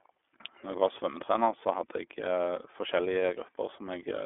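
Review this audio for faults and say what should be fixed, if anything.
Throughout, the speech sounds thin, boxed-in and plainly rough, with nothing above 3.8 kHz. The iLBC codec codes each 30 ms frame independently, which points to its lower-rate mode. To prevent it, use a wideband codec or record directly rather than over a narrowband call path.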